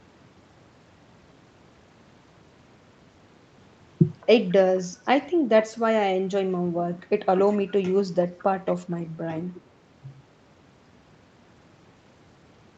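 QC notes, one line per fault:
4.21–4.27 s, 8.38–8.44 s and 8.66–8.76 s, echo leak: the far end's echo canceller likely let part of its loudspeaker pickup through, returning the speech about 217 ms late. Each time a brief scrap of the voice trails behind itself, 60 to 100 ms long and very faint, roughly 25 to 30 dB under the speech, slightly louder in the two later bursts.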